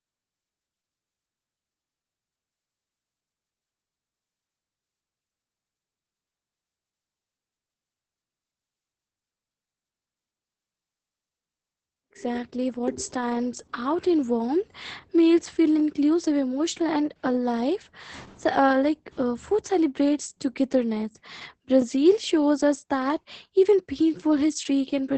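Opus voice compression runs throughout the speech. The SILK linear-prediction coder, working at what sounds like a very low bitrate around 10 kbps, codes the excitation coarsely and leaves nothing above 8.5 kHz, so the voice turns heavily muffled, hoarse and slightly robotic.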